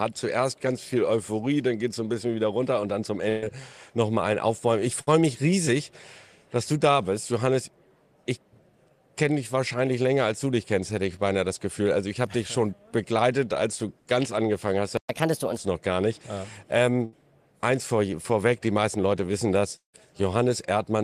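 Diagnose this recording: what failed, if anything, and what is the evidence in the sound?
The network path shows a burst of packet loss three times: 3.29 to 3.46 s, 5.01 to 5.09 s and 17.05 to 17.14 s. Each time the last bit of sound gets stretched into a short buzz or hiss that dies away, about 130 ms, 60 ms and 75 ms of it, and then the audio picks up further along. Roughly 120, 60 and 80 ms of the original simply never arrive, so you hear small jumps forward.

Around 14.97 s there's a playback stall: the output just goes dead for about 120 ms in mid-flow, with no fill at all, and then resumes. That clean silence rather than a fading buzz points at the player side. Most likely the playback buffer ran dry or its thread got held up briefly, rather than anything upstream on the network.

Right after the stall, from 15.09 to 15.57 s, you get catch-up at higher speed. The player runs the backlog at 1.25 times normal by resampling, so everything sounds rushed and lifted by about four semitones for roughly half a second, then drops back to normal pitch and pace. 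That's the player clawing back the 120 ms it lost.

Near the end, 19.76 to 19.95 s, there's a long network dropout. The last sound is held as a fading buzz and then goes silent, about 170 ms of fill in all, with around 130 ms of it silence, before the audio returns. About 180 ms of material is gone. The held-then-silent shape is what you'd expect when the receiver stops getting anything, likely a brief loss of the connection.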